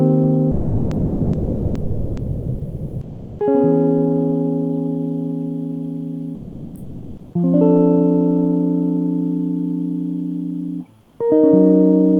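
Sound dropped by the voice detector, from 0.51 to 3.39 s and from 6.35 to 7.33 s: the music gives way to steady noise, losing about 2.5 s and then 0.62 s of playing, most likely because a discontinuous-transmission detector, probably Opus DTX, mistook the music for background and stopped sending.

Comfort noise in place of the background, from 11.01 to 11.19 s: for 180 ms the quiet background, about 35 dB below the loud passages, becomes a flat, featureless hiss about 4 dB lower, likely synthetic fill played while transmission paused.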